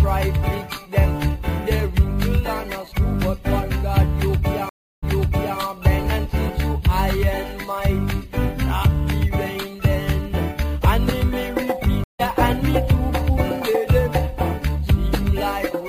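At 4.69 s there is a stream reconnect lasting until 5.58 s. The connection dropped, the player fell silent for 332 ms, then reconnected and restarted its decoder mid-stream. The audio comes back 557 ms earlier, so a stretch repeats, as when a server resends a burst. A second stream reconnect runs from 12.04 to 12.21 s. It has 154 ms of silence and resumes roughly a tenth of a second later, skipping ahead. Each restart fades in on its first frame.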